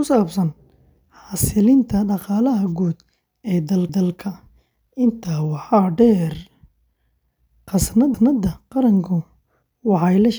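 A stutter at 3.89 to 4.14 s and again at 8.14 to 8.39 s repeats a 250 ms stretch of the speech. These are overlapping chunks: the audio was handled in 4.0 s blocks, each starting a quarter-second before the previous one ended, so the joins replay.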